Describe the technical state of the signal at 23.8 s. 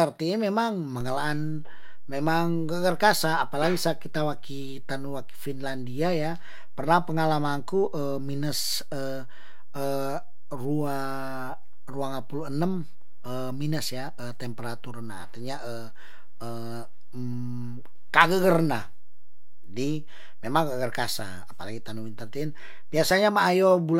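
At 23.8 s the audio is intact, with no technical fault present at that moment.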